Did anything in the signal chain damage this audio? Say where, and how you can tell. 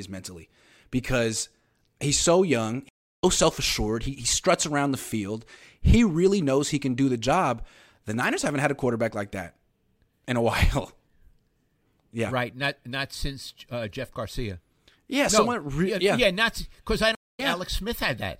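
Yes, at the network stage: two stream reconnects. The speech goes silent from 2.89 to 3.24 s (339 ms) and from 17.15 to 17.40 s (234 ms). Each time it resumes roughly 0.3 s and 0.2 s further on, where a fresh decoder rejoined the live stream.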